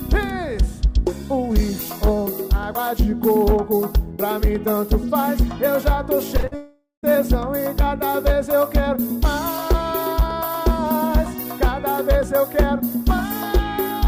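At 6.37 s and again at 6.41 s come two short concealed packet losses, each about 20 ms of audio that arrived too late for the decoder. The receiver bridged each hole by extending the preceding sound for roughly 14 ms and 21 ms, then crossfaded back. They are heard as a quick smear or wobble. On a spectrogram the harmonics or noise bands simply stretch across the gap, and the waveform shows a slightly too-regular repeated cycle.

From 6.47 to 6.53 s a burst of packet loss removes about 40 ms in one run. Concealment continued the last sound for around 46 ms while pulling its level down, so it comes across as a brief held buzz or hiss that sags before the audio picks up further along with that stretch gone. The spectrogram shows frozen, flat horizontal bands thinning out, and the waveform envelope tapers.

At 6.55 s the sound turns into a fading, static continuation that lasts nearly half a second, ending around 7.05 s with about 150 ms of silence before the audio returns, having skipped roughly 480 ms. 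This is likely a long network dropout, with the receiver stretching the last sound until it gave up. On a spectrogram it appears as smeared, unchanging bands dimming into an empty column, and the waveform shrinks to a flat line before the next onset.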